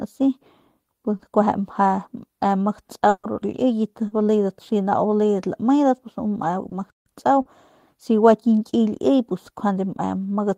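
At 1.17 s, 4.07 s, 6.69 s and 7.41 s (the last just before "si gua"), short concealed packet loss leaves brief smears of 20, 40, 20 and 40 ms. Those stretches never arrived, so the decoder extended the preceding sound from its pitch or as shaped noise and crossfaded back. On a spectrogram each shows harmonics or noise running unnaturally flat for a few hundredths of a second. The waveform shows a short, overly regular stretch where the audio should have varied.

From 3.09 to 3.25 s a burst of packet loss removes about 140 ms. The receiver kept repeating the last sound while lowering its level, which gives a held buzz or a fading hiss with no silence in between. The sound then resumes later than it would have, with that portion missing. A spectrogram shows frozen, repeated content thinning out, then an abrupt jump to different content. The waveform envelope tapers smoothly before the sudden restart.

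From 6.90 to 7.06 s the sound stops dead for about 158 ms and then continues. This is a playback stall, likely the player running dry or its output thread being blocked. On a waveform it appears as a flat line of silence with hard edges. A spectrogram shows a clean blank vertical strip across all frequencies.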